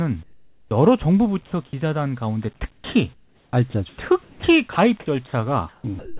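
From 0.23 to 0.71 s, comfort noise in place of the background: the real room sound gives way to a flat, featureless hiss about 13 dB quieter, likely from discontinuous transmission during the pause.

At 0.69 to 0.71 s, an onset clipped by the voice detector: the first 20 ms of speech are missing, so it starts abruptly, covered by synthetic noise.

At 1.46 to 1.52 s, sound dropped by the voice detector: about 50 ms of speech is likely treated as background and replaced by steady noise before returning.

From 2.72 to 4.76 s and again from 5.27 s to the end, sound chopped by the voice detector: transmission likely switches on and off repeatedly, with about 870 ms and 420 ms replaced. The speech has several holes. Throughout, the narrowband call path leaves nothing above 4 kHz.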